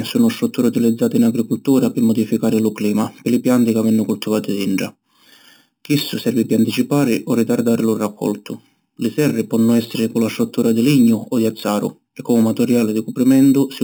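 Speech runs throughout with imaging from sample-and-hold upsampling: a bright metallic fizz across 4 to 8 kHz, about 20 dB under the speech and tracking its level, which points to 8 kHz audio repeated up to 48 kHz. The fizz moves opposite to the pitch.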